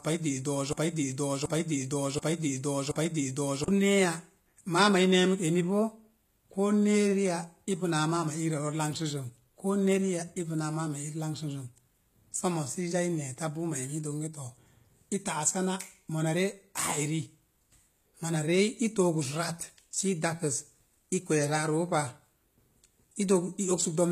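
From the very start to 3.68 s, a broken-record loop is already under way: the same 0.73 s fragment plays four times back to back, which points to a stall in the player, encoder or stream. The waveform and spectrogram show identical repeating blocks, and the audio meant for that span is lost.

Throughout the clip the treble carries plainly audible damage, likely from HE-AAC compression at a low bitrate, around 20 kbps. The upper band is rebuilt from copied lower bands, so s sounds come out gritty, metallic or lispy. A spectrogram shows smeared, repeated-looking texture up high and nothing above 14.9 kHz.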